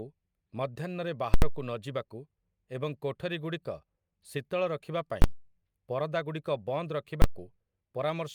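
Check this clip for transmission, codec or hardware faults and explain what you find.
The speech has one fault, repeated three times. Invalid numbers at full scale appear at 1.34 to 1.42 s, 5.22 to 5.24 s and 7.22 to 7.24 s: invalid results in a calculation forced the output to its extreme value for a whole block. The 80 ms block is a loud pop at each edge with silence between, and the two 20 ms blocks are single bangs.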